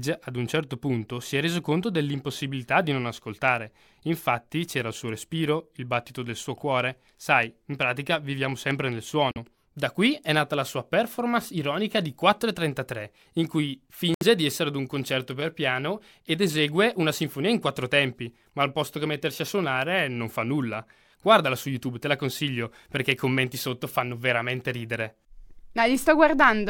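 Speech cuts to silence at 9.31–9.38 s after "pratica viviamo sempre nel", and at 14.14–14.23 s between "in cui" and "di essere ad un". The audio then resumes further on, likely a Bluetooth dropout from late packets.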